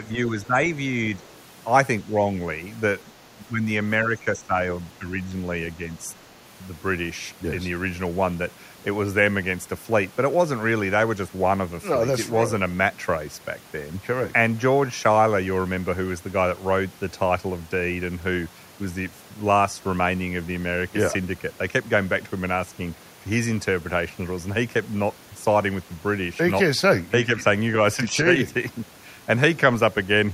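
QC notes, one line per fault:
0.07–0.54 s, speech suppressed in double talk: the talker's level sinks by about 10 dB for roughly a fifth of a second in total. The likely cause is both ends talking at once, so the echo canceller couldn't tell the local voice from loudspeaker echo and attenuated everything it heard.
1.19–1.23 s, other side's voice leaking through: a brief, faint scrap of a second voice, about 35 dB below the talker. The likely cause is far-end audio from the loudspeaker reaching the microphone and not being fully removed by the echo canceller.
3.35–3.65 s, 4.04–4.55 s and 4.99–5.11 s, speech suppressed in double talk: three close dips in the talker's level, about 10, 10 and 5 dB deep, totalling roughly 0.6 s of affected audio. The likely cause is the same overlap of both sides, with the suppressor pulling the near-end voice down along with the echo.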